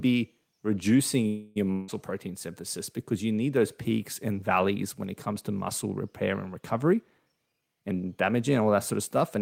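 At 1.27 s, just after "be reducing", the speech hangs for about 0.3 s. This is a call audio freeze. Packets were likely held up, so the jitter buffer ran empty. The last sound stretches into a fading buzz. Speech then resumes where it stopped, with nothing lost.

From 1.72 to 1.90 s comes a long network dropout, ending just before "protein synthesis because you". Audio likely stopped arriving. The last sound is drawn out as a fading hiss for about 0.16 s. When speech returns, roughly 0.16 s of it is gone.

From 6.93 to 9.37 s, after "to muscle repair and", there is a jitter buffer speed-up. The buffer held more audio than it needed. To reduce the delay, the receiver cut short pitch-period pieces again and again, about 0.3 s in total. The speech runs about 10% faster at the same pitch and sounds hurried.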